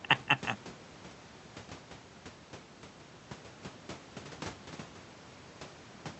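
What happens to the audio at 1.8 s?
Nothing goes wrong at 1.8 s: the speech passes through intact, carrying only the ordinary character of the Opus call path, whose band limit tops the sound out at around 8 kHz.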